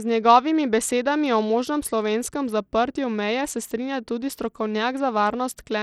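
From start to finish the speech carries plainly audible damage, most likely from Bluetooth SBC compression at a low bit pool, which fits a bitrate near 80 kbps. The upper sub-bands get too few bits, so the treble drops out and flickers while a gritty quantisation noise and aliasing sit on the voice. A spectrogram would show the top band as a patchy, blocky shelf switching on and off, with grainy noise filling the gaps between harmonics.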